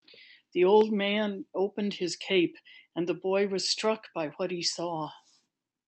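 Speech, with no technical faults heard anywhere.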